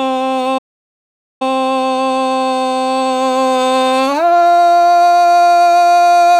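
At 0.58 s the music cuts to silence until 1.42 s, a playback stall of about 0.83 s, likely the player starving for data before resuming.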